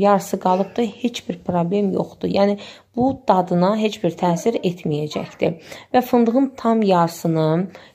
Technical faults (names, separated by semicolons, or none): none